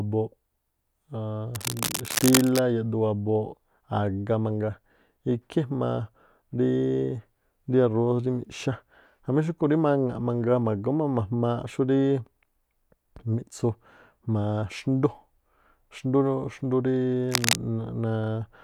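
From 1.54 to 2.60 s, and again from 17.29 to 17.55 s, scratchy rustling bursts ride over the speech, slightly quieter than the speech at first and about as loud the second time. This cable scratch noise is likely a worn cable or connector being moved.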